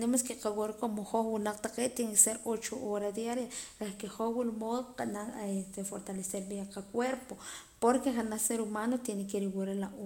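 Nothing in the speech stood out as a technical fault on listening.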